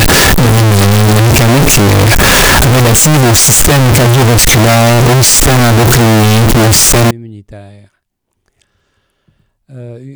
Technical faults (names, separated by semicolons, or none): float read as integer